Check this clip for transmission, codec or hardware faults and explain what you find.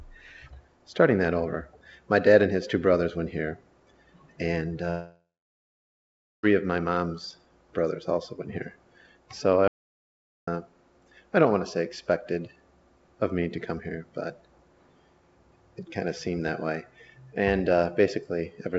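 Two faults are audible, both gaps where material is lost.

From 4.90 to 6.45 s, a long network dropout is likely: the last sound smears into a fading buzz for about a third of a second, then roughly 1.2 s of near-silence, unlike a hard cut.

From 9.68 to 10.47 s, about 0.8 s drops out to silence, likely an input loss written as silence: it stops and restarts abruptly, with dead digital silence and no concealment tail.

The call-codec band limit, with nothing above 8 kHz, is audible throughout.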